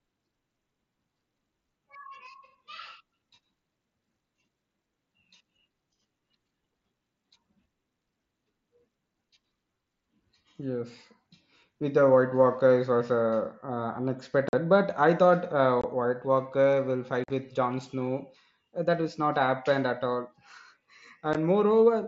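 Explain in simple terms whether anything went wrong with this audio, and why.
Unconcealed Bluetooth headset packet loss causes short holes in the speech at 14.49–14.53 s, 15.81–15.84 s, 17.24–17.30 s and 21.33 s. Tiny chunks of voice traveling from the headset to the phone went missing, and nothing filled the gaps, so the sound simply cuts out with sharp edges. The gaps fit lost packets of about 7.5 ms each. At 17.24 s several losses cluster together, giving a brief chopped patch. The wideband mSBC headset codec carrying the speech works as designed.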